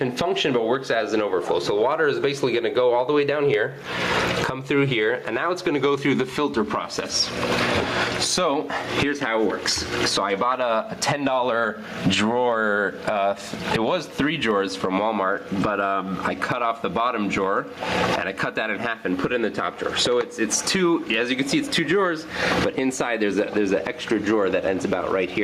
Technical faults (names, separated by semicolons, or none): gain pumping